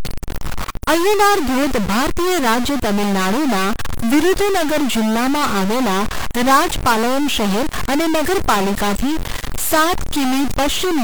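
From start to finish the speech carries added noise and distortion riding on the waveform, and the pauses fill with noise rather than falling quiet. The likely cause is a stuck bit, where one data bit held at 0 or 1 throws roughly half the sample values off by that bit's weight.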